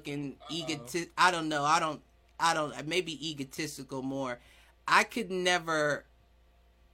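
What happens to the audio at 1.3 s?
Nothing goes wrong at 1.3 s; the speech plays through that moment intact, with no dropout, click, or distortion.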